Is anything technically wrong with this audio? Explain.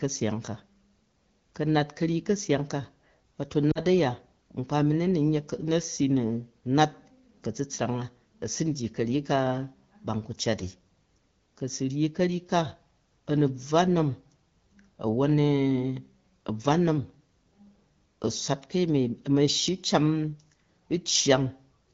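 Yes. Lost AMR speech frames occur at 3.71 to 3.80 s, a gap of about 40 ms that fits two 20 ms frames. With corrupted frames failing their checksum, the AMR-WB decoder, whose light coding sounds consistent with about 12.65 kbit/s, repeated the last good pitch and vocal tract settings at falling gain, producing a brief drop to near silence before the speech recovers.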